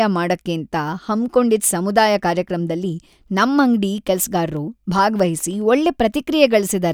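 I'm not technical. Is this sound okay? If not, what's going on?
No, not quite. Between about 4.57 and 5.62 s this speech clip has CD scratch ticks: six tiny clicks, roughly six a second, the longest only about a millisecond long. A scratch on the disc spoils a bit of data every turn, and the player patches over it.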